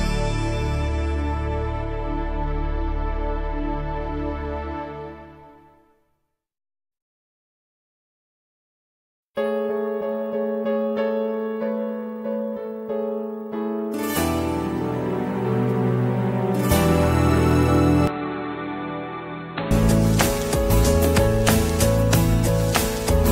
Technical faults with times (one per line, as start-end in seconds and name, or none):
0.00-4.00 adaptive stream starting at a low bitrate
18.07-19.71 input switched to a poorer device